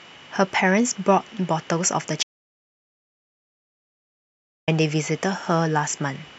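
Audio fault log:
2.23–4.68 s, audio dropout to silence: the speech cuts out mid-flow, then 2.45 s of silence with no room tone at all, before it snaps back. The input was likely lost while the recorder kept writing silence, so that stretch is gone.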